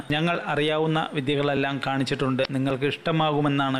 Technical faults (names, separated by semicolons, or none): dropped buffer (overrun); damaged data in a compressed stream